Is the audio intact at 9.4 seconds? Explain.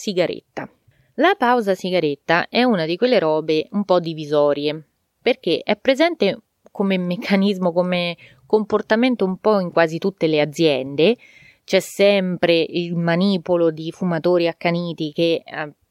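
No, not quite. At 9.36 s, between "comportamento un" and "po' in quasi tutte", there is a corrupt FLAC frame. Flipped bits went unchecked, so the decoder's prediction ran on wrong values for about 2 ms, which fits damage touching two adjacent frames. It sounds like a faint tick peaking at about -42 dBFS. Unlike a dropout, the gap isn't silent but holds garbage samples, and the audio is clean again as soon as the next intact frame begins.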